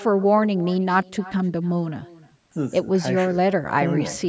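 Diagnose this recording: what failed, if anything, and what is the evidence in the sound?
The failure is an echo with no canceller, at the call-processing stage. Throughout the speech, each phrase returns about a third of a second later, about 20 dB down and thin. The far end's loudspeaker fed its microphone, and nothing subtracted it. The band stops at 8 kHz.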